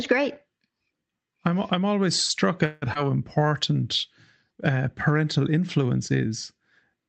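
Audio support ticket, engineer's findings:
Call audio freeze, 2.65–2.84 s. The last sound is held as a fading buzz for 164 ms, then speech resumes where it stopped. Nothing is lost, but delay grows by 164 ms. Likely cause: delayed packets left the jitter buffer empty.

Skip ahead, 2.94–2.97 s. Roughly 70 ms of speech is gone, and the two sides are joined by an 11 ms seam. Delay drops back by about the same amount. Audio was dropped, in transit or by an overflowing jitter buffer, while later packets waited.

Jitter buffer slow-down, 3.39–3.85 s. Speech runs at 90% speed with unchanged pitch. Sounds are drawn out, adding 55 ms in total. The buffer repeated pitch periods to rebuild its reserve. Band-limited Opus call path audible throughout, top end near 8 kHz.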